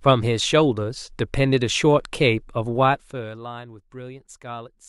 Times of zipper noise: 2.76-3.45

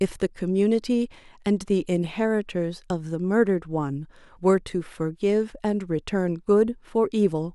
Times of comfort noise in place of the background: none

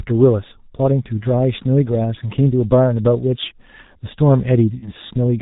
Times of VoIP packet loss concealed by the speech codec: 4.79-4.89

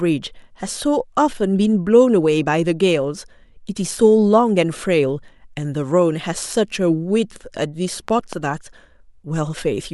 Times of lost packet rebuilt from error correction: none

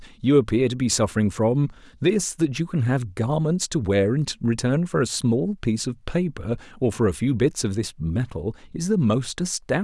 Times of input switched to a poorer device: none

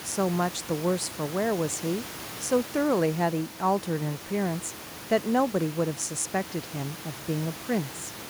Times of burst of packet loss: none

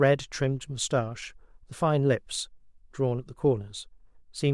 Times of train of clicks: none

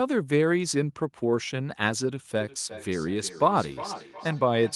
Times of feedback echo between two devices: 2.40-4.76

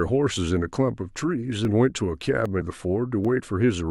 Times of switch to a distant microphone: none

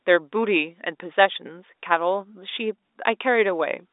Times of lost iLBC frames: none

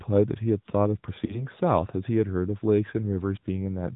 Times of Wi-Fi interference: none

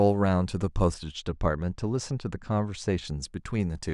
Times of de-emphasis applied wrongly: 0.94-3.07

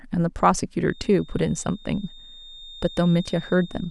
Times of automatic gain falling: none

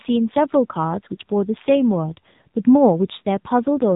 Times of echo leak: none

